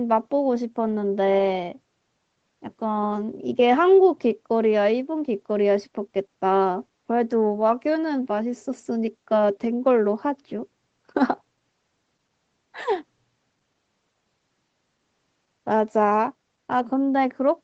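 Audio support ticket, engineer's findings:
No defects found in the speech; content tops out at 8 kHz, consistent with the call microphone processing and a wideband WebRTC call path, both behaving as expected.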